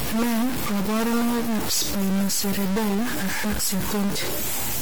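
From start to finish the speech carries distortion and noisy pauses, likely a stuck bit; unlike clipping, quiet passages suffer too.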